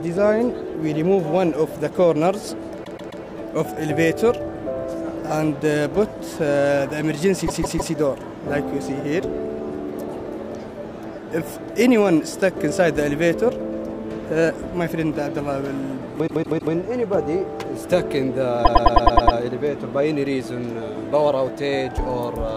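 Stutters are heard at 2.84–3.23 s, 7.46–7.93 s, 16.26–16.73 s and 18.64–19.37 s. These are repeated frames: a short block of compressed audio (131 ms, 157 ms, 157 ms, then 105 ms) is decoded again, three extra times in the first three events and seven in the last, lengthening the audio by each repeat.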